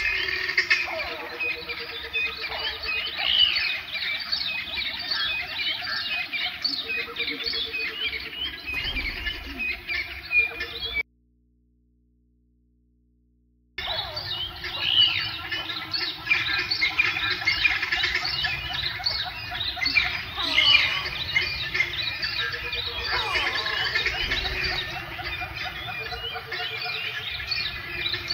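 Damaged data in the compressed stream at 6.25 s gives a brief glitch: the decoder misreads corrupted frames, loses sync and jumps ahead to the next header. An audio dropout to a faint residue runs from 11.01 to 13.78 s, leaving only low mains hum well below the sound for 2.77 s, likely from the signal being lost before a still-live input.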